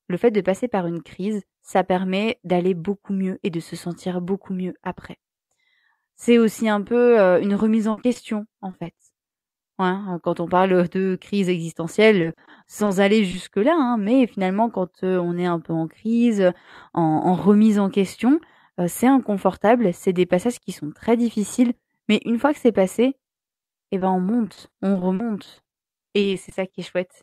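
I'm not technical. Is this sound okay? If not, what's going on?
No. Repeated packet loss (robotic sound) occurs at 7.91 to 9.23 s, 12.21 to 13.35 s and 23.99 to 26.75 s. Bits of the signal keep going missing in transmission. Each hole, at most 60 ms, is patched by stretching the previous sound, so the speech turns choppy and robotic.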